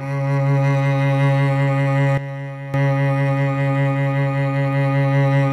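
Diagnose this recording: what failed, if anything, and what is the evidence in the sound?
The music drops by about 12 dB at 2.18 s and snaps back up at 2.74 s, with the noise floor falling and returning right along with it. That's a sudden gain jump, likely a digital gain setting in the processing chain applied instantly instead of ramped.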